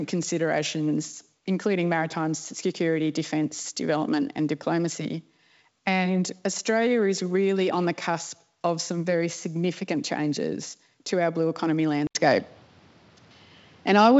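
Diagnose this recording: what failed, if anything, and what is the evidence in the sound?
At 12.07 s there is an 80 ms gap. Then the speech turns duller, loses everything above 6.5 kHz and gets noisier. Input likely switched to a poorer device at the driver.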